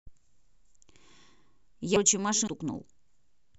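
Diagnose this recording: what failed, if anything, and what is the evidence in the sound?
The speech jumps abruptly at 1.96 s, 2.48 s and 3.07 s. Each jump leaves no gap of silence, and roughly 300 ms of sound vanishes at the first two points and about 150 ms at the third. That points to the driver or buffer stage, likely a dropped buffer (overrun), where captured blocks were overwritten before being read and the remaining sound was spliced together. A network dropout or glitch would usually leave a silent hole instead.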